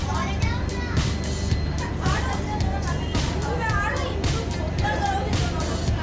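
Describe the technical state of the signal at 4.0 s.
At 4.0 s the signal is intact, with no dropout, distortion, glitch or other technical fault audible at that point.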